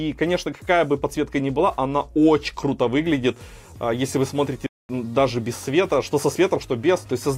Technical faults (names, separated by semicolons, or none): Bluetooth dropout